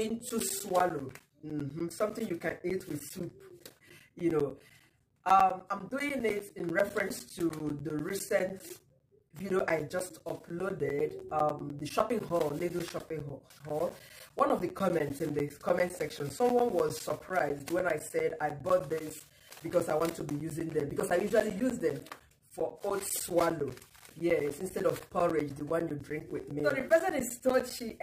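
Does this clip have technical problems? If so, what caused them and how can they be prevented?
Yes: periodic USB or driver dropouts, where the bus or driver stalled every 0.1 s from 0.09 to 27.9 s, each time losing around 10 ms to silence, heard as steady ticks. Preventing it means disabling USB power saving and moving the interface off hubs or off a bus shared with busy devices.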